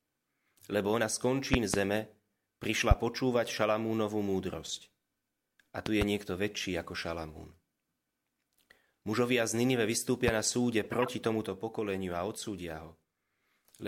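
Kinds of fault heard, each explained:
Loud pop: Sharp pops stand well above the speech, two doubled and two single. Each likely comes from a brief voltage pulse.
Corrupt frame decoded: Damaged compressed frames were played anyway. From 10.84 to 11.09 s, misplaced energy spreads across about 7 damaged frames.
Sudden gain jump: At 11.46 s the level drops by about 4 dB in one step, noise included. A setting likely changed without a ramp.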